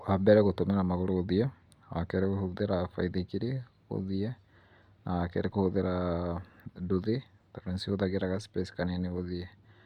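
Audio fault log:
No faults detected anywhere in this speech recording.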